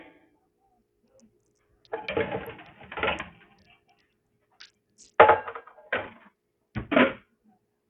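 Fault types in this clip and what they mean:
Noise suppressor applied to music or sounds: A speech-oriented noise suppressor stayed active on non-speech audio, treating steady parts and tails as noise. Here the level swings by a few decibels, so held sound and decays pump and thin while sharp onsets pass.
Bluetooth SBC compression: The audio was likely squeezed through the SBC codec with too few bits, which fits a low bitrate around 48 kbps. The damage is heavy: nothing survives above 17.9 kHz, the upper range flickers, and gritty quantisation noise rides on the sound.
Sound cut by the noise suppressor: The suppressor judged stretches of the sound to be noise and pulled them down, at worst by about 17 dB. It happens from 0.09 to 0.8 s, 0.99 to 1.92 s and 3.31 to 4.54 s, where steady and fading parts sink.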